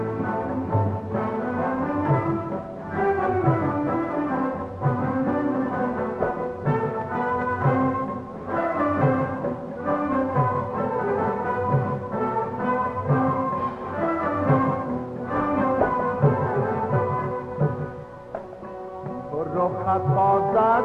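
Nothing in this audio stands out as a technical problem.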